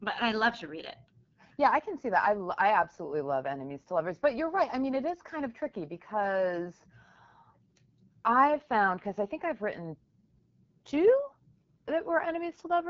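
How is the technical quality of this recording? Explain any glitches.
The technical quality is held back by one fault that runs through the whole clip: AMR wideband (HD Voice) codec damage, plainly audible from start to finish. The codec rebuilds the speech from a pulse-driven model of the vocal tract. At this setting that leaves it rough and raspy, which points to one of its two lowest rates, around 8.85 kbit/s. What separates it from narrowband phone coding is the bandwidth: the sound reaches about 7 kHz instead of stopping near 3.4 kHz. The top band is thin and noise-like, and nothing is present above 7.3 kHz.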